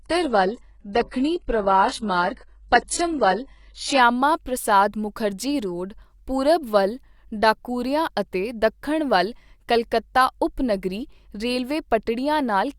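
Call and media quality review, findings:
Adaptive stream starting at a low bitrate, 0.0–4.0 s: dull, swirly speech, nothing above 11.1 kHz, then abrupt step up in quality at 4.0 s. Spectrogram shows flat ceiling, then higher top; waveform has no gap. Player start-up; fits ~12 kbit/s HE-AAC rising to 96 kbit/s AAC-LC.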